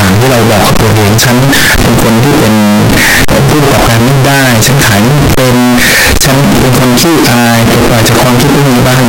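From start to finish the speech comes out as a harsh, blaring near-square wave at an almost fixed, high level, hiss as loud as the talker: likely float read as integer, 32-bit float samples taken as 32-bit integers.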